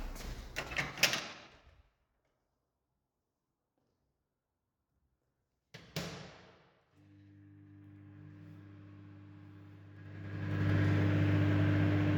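At 0.56 s the level starts dropping in a staircase, about 25 dB in total, and you can hear zipper noise riding on the sound until 1.76 s. The gain is moving in unsmoothed 3 dB jumps, around seven a second, and each jump leaves a little click. It happens again from 9.92 to 10.7 s on the way back up by roughly the same amount, now at around ten steps a second, so the ticking sounds tighter.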